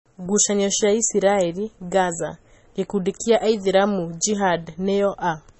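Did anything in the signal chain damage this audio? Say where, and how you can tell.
Yes, at the codec stage, throughout the speech: nothing sits above 8 kHz, so a spectrogram shows a flat ceiling there, with smeared, watery detail below. This is likely low-bitrate audio saved at a high bitrate: a heavily compressed MP3 re-encoded larger, which cannot restore what was discarded.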